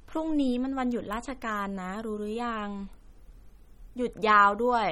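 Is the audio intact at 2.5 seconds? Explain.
No, MP3 compression damage runs through the whole clip. Dropped weak lines give a watery swirl, and a spectrogram shows flickering gaps and a hard ceiling at 17.9 kHz, likely from a low bitrate.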